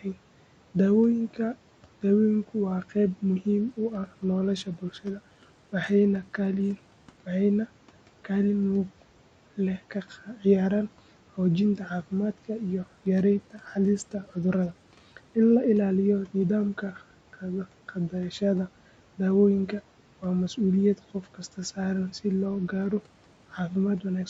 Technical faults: Bluetooth SBC bit pool drop; speech cut by the noise suppressor

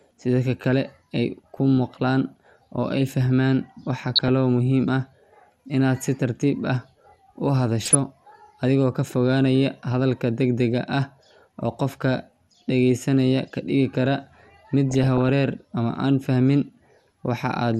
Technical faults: MP2 compression; DAB burbling

